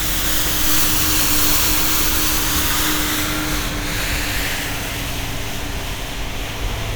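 A recording of sounds, with no technical fault to be heard anywhere in it. Nothing in the signal chain draws attention to itself at any point.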